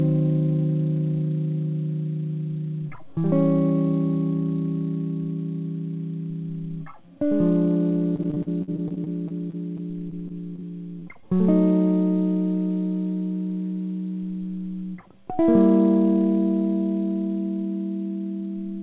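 From 8.16 to 10.64 s, packets kept failing to arrive in time, producing repeated packet loss with its robotic sound. Each hole, the longest about 51 ms, was patched by extending the last stretch of audio, and the next hole followed soon after, so about 16% of that span is concealment. The music turns choppy, with fragments missing in place of natural continuity.

Shortly after, three isolated bursts of short concealed packet loss occur at 11.00–11.04 s, 11.14–11.17 s and 11.21–11.24 s. In each, about 20 ms of the stream never reached the decoder, and the receiver bridged the hole by carrying the preceding sound forward before blending back into the real signal. Each registers as a brief smear or wobble in the music. All of this sits within the call path's narrow band, with nothing above 4 kHz, as expected of G.711 A-law.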